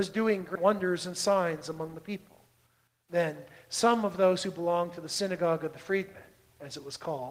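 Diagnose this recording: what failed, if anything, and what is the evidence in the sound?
Skip ahead at 0.55 s, in the network or its jitter buffer. About a fifth of a second of sound is dropped. Both sides join with no gap.

Jitter buffer speed-up from 0.64 to 2.09 s. The buffer trims short pitch-period pieces to shed its backlog. Sound runs 5% fast at unchanged pitch.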